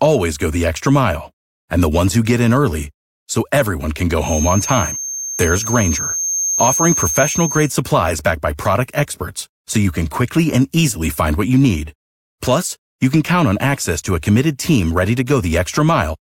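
From 4.19 to 7.74 s, after "early so everyone can", a feedback whistle sits at 6.4 kHz, a few decibels under the speech. The speaker-to-microphone loop likely hovers at its edge. It fades before "supplies backed by product".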